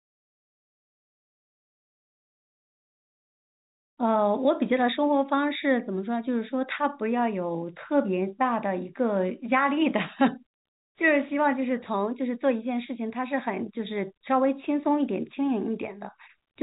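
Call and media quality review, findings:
Nothing stood out on listening to this speech clip, which carries the narrow telephone bandwidth of its G.711 path.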